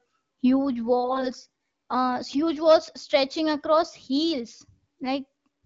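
From 1.04 to 1.26 s the speech turns hoarse, scratchy and gargly. These are AMR bit errors: on a poor link, weakly protected bits in the coded frames arrive flipped while the checksum on the critical bits still passes. The decoder places excitation pulses wrongly and misreads fine pitch, gain and spectral values. The 0.22 s burst fits roughly ten 20 ms frames, at an error rate of several percent. Unlike frame loss, there is no gap, muting or repeated sound. Pitch and loudness roughly hold, but the texture is wrong. Around it, the wideband AMR-WB (HD Voice) codec sounds clear with only light coding roughness, which points to a 12.65 kbit/s mode.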